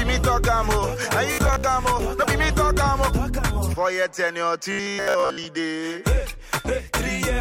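Two stretches of robotic sound from repeated short buffers show up, from 1.32 to 1.65 s and again from 4.72 to 5.45 s. Both times the audio collapses into a stiff, metallic buzz at about 66.7 Hz, which points to a 15 ms chunk being looped. The likely cause is audio arriving too slowly, with the player covering the gaps by replaying that last slice. Roughly half the first stretch is repeated, and most of the second.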